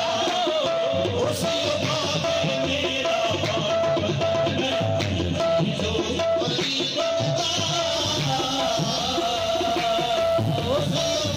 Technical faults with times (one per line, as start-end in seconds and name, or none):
7.93-11.37 mains buzz